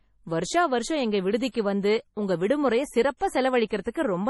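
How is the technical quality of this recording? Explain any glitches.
The recording is heavily degraded. Throughout, the speech sounds watery and swirly, with metallic chirps on the s sounds and nothing above 11.5 kHz, so the treble is dull. This is likely MP3 compression under heavy strain, consistent with a very low bitrate around 32 kbps. With too few bits, the encoder cuts the top band at a fixed frequency and drops weaker frequency lines, which flicker on and off between frames.

Near the end there is pre-echo at 3.68 to 3.71 s, 3.82 to 3.86 s and 3.92 to 3.95 s. Each sharp onset is preceded by a short hiss lasting about 28, 36 and 35 ms, and the attacks themselves sound soft and smeared. The codec spreads its quantisation noise across an entire block. When a loud onset arrives late in that block, noise sized for the loud part also spills into the quiet moment just before it.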